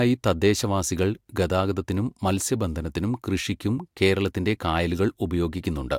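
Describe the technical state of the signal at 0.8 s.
At 0.8 s the speech signal is intact, with no audible technical fault at that moment.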